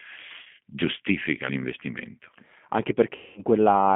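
Throughout, the G.729 codec band-limits the speech to roughly 150 Hz–3.5 kHz and rebuilds it from a coarse pulse model, giving a plainly rough, synthetic edge. At 0.43–0.48 s, just before "giustifica l'investimento anche", VoIP packet loss concealed by the speech codec fills a 30 ms gap, consistent with one packet, with a brief stretched extension of the sound. At 3.15–3.43 s, after "giustifica l'investimento anche", a 210 ms loss stretches into a fading buzzy tone or coloured noise that leaves the following speech weak.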